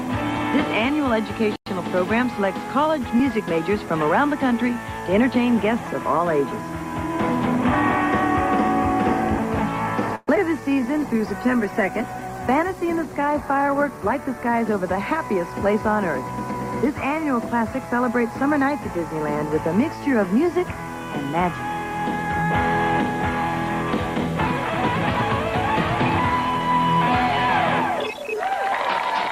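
A cluster of network faults hits this audio around the 10-second mark. From 10.15 to 10.29 s the sound stops moving forward: the last bit is drawn out as a fading buzz or hiss for about 118 ms, including roughly 10 ms of near-silence, then resumes from exactly where it left off, so nothing is lost, just a gap inserted. That's likely a call audio freeze, with packets held up and the jitter buffer running dry. Right after, at 10.35 to 10.38 s, there's a skip ahead: around 70 ms of audio is dropped and the two sides are butted together almost directly, so the playback jumps forward. Immediately following, at 10.38 to 10.40 s, comes a short concealed packet loss. About 21 ms never arrived in time, so the decoder papered over it by extending the previous sound and blending back in, giving a brief smear. Then from 10.48 to 11.19 s a jitter buffer slow-down stretches things to 91% speed by repeating tiny pitch-period or pause fragments, adding about 70 ms. 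The pitch stays put while sounds drag out. Overlapping that, a call bitrate drop starts at 10.97 s. The encoder falls from 64 to 16 kbps, sits at the lowest rate for about 2.4 s and recovers by 14.88 s, and the coarser coding makes the sound rough, watery or muffled through that stretch. Finally, a jitter buffer speed-up runs from 13.58 to 15.67 s at 105% speed, trimming roughly a tenth of a second in small pitch-period cuts to shrink the backlog, so it comes across as hurried at an unchanged pitch.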